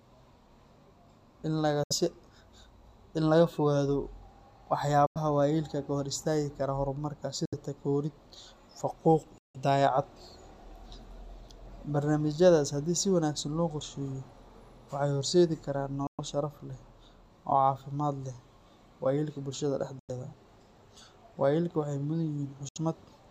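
Speech, broken by seven brief silences at 1.83, 5.06, 7.45, 9.38, 16.07, 19.99 and 22.69 s, each about 70 to 160 ms long, with the longest at 9.38 s. These are likely Bluetooth dropouts: packets arrived too late and were discarded, so the output went silent and resumed as though it had played on. You can hear this after "kara horumarka" and before "waayeelka ka" and "sharaf leh". On a waveform each one is a flat gap with abrupt edges or a fade of a few milliseconds. On a spectrogram it is a blank vertical band across all frequencies.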